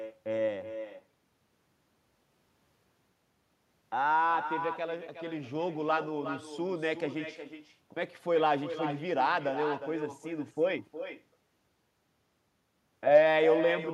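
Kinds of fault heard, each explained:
Echo with no canceller: the far end is playing the call out loud, their microphone catches it, and nothing strips it out before it heads back. So the whole way through, every phrase is trailed by a second copy arriving roughly 400 ms later, about 10 dB down, sounding thinner than the direct speech. That gap is long enough to hear as a distinct repeat rather than just added room sound.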